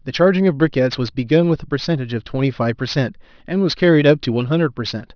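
Aliasing runs through the whole of this speech clip, start to finish. The audio was brought down to a lower sample rate with no anti-alias filter first, so energy above the 5.5 kHz fold point reflects back into the band as unrelated, inharmonic tones, roughly 25 dB under the speech. Sibilants come out gritty and metallic, and the spectrum stays full right up to 5.5 kHz, which fits a drop from 24 kHz to 11 kHz.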